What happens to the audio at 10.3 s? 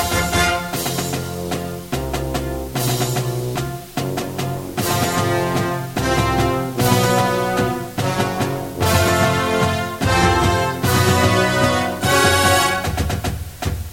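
At 10.3 s the low bit depth with dither is present, as it is for the whole clip. With only 7 bits, dither turns rounding error into a steady, even hiss about 20 dB below the signal, with no distortion. A spectrogram shows a flat broadband noise floor; the waveform looks uniformly fuzzy.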